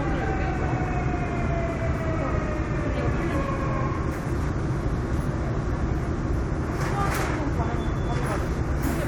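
No technical faults can be heard anywhere in this recording of sounds. Nothing in it points to a problem with how the audio was captured or passed along.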